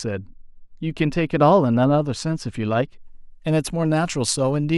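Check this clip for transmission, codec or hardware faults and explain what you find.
The first three seconds carry a clear fault, de-emphasis applied wrongly. From 0 to 3.0 s the speech has had a treble-cut filter placed on it, one meant to reverse a pre-emphasis boost that was either never there or already undone. The cut deepens steadily with frequency, reaching about 13 dB down at 10 kHz compared with 1 kHz, so sibilants and consonant detail turn dull and muffled. A spectrogram shows the upper bands darkening smoothly across that span.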